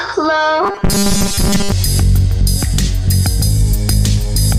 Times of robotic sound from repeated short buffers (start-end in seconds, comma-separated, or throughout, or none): 0.63-1.72